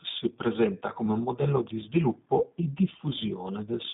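Speech that sounds slightly rough and synthetic throughout, confined to a narrow telephone band from about 150 Hz to 3.7 kHz, with no content above it. This is the G.729 codec, and the plainly audible damage fits its 8 kbit/s operation, which rebuilds each frame from a vocal tract filter, a pitch estimate and a handful of pulses. From 2.39 to 2.45 s the sound briefly smears into a fading buzzy tone or coloured noise and stays weak for a moment afterwards. This is VoIP packet loss concealed by the speech codec: a gap that fits one lost 10 ms frame was filled by extending the last pitch and filter, and the following frames took time to recover.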